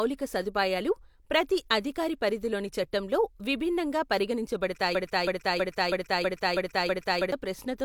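At 4.95 s the speech falls into a broken-record loop. A 0.32 s fragment repeats back to back seven times, identical each pass, until 7.32 s. The audio meant for that stretch is lost, likely because the stream stalled and kept resending its last chunk.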